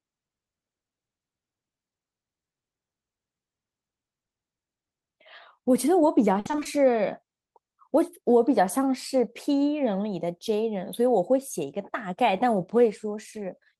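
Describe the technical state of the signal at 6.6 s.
Repeated packet loss from 6.39 to 6.67 s leaves half a dozen holes, up to 60 ms each, patched by repeating prior sound, so speech turns choppy and robotic.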